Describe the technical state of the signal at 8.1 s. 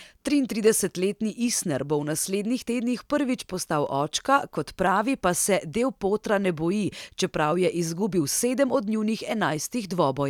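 At 8.13 s the stream has likely dropped samples, losing only a fraction of a millisecond, so the waveform jumps abruptly from one value to a later one. That step is heard as a single sharp click in the speech, too brief to remove any sound.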